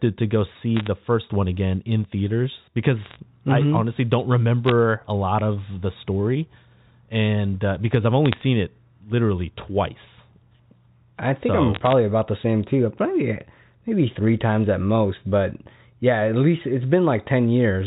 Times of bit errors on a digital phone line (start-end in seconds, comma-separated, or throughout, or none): 0.77-0.88, 3.03-3.16, 4.67-4.72, 8.26-8.41, 11.75-11.93, 13.41